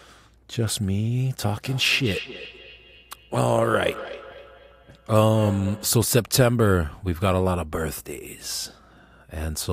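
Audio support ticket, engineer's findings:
Speech returns as a trailing repeat roughly every 300 ms, 1.53 to 6.03 s, peaking about 14 dB below the direct speech. Feedback echo between two devices: a second device on the call replays this microphone's signal, which re-enters this microphone; the local echo canceller ignores sound it didn't play.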